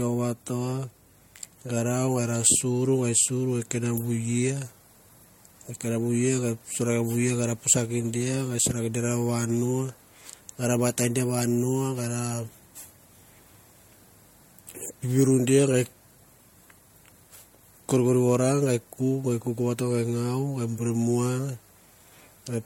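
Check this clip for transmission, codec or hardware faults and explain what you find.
One codec fault runs through the whole clip. Generation loss is audible from start to finish: the speech sounds swirly, hollow and smeared, with blurred consonant attacks and nothing above 16.6 kHz. It is likely from repeated MP3 encoding, perhaps about three passes at a rate pointing to 64 kbit/s, each requantising on a shifted frame grid. Unlike a single low-bitrate encode, the artefacts compound into more smear than that bitrate alone would produce.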